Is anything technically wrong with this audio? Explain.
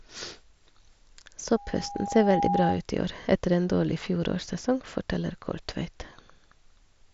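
Yes. From 1.55 to 2.82 s, just before "i år etter en", there is a loudspeaker feedback squeal: the microphone picks up its own loudspeaker, and at 810 Hz the loop gain passes one, so that tone feeds on itself. It swells over roughly a second into a steady whistle about 5 dB above the speech. A spectrogram shows a single bright horizontal line at 810 Hz, and the waveform's envelope ramps up over that stretch. The speech itself has the mSBC Bluetooth headset sound, with nothing above 7.7 kHz.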